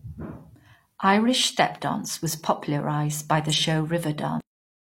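Just after "stepdance was popularized by", frames out of order at 3.50 to 3.64 s swap two 46.4 ms blocks, giving a garbled flutter, visible as spectrogram discontinuities. At 4.40 s a cut-off end stops the speech mid-sound. The final buffers never played, so the waveform drops straight to flat digital silence with no decay.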